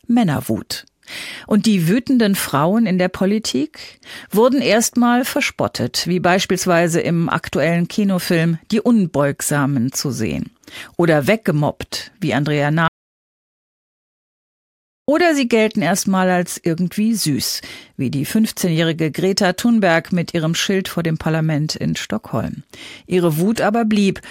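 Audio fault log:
12.88 to 15.08 s, audio dropout to silence. The speech cuts off mid-flow and returns about 2.2 s later. The gap is silent, with no room tone at all. The input was likely lost while recording carried on writing silence. Whatever was said there is gone.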